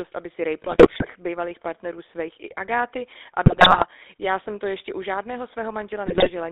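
Throughout, the speech has a buzzy, gravelly roughness and nothing above 3.7 kHz, the sound of the GSM full-rate codec, whose coarse pulse-driven vocal-tract model fits a 13 kbps stream. From 0.62 to 1.06 s, 3.46 to 3.85 s and 6.06 to 6.31 s, the speech breaks into squawks, pops and gargling. These are GSM bit errors, where corrupted filter, pitch and gain values distort the spectrum and level frame by frame.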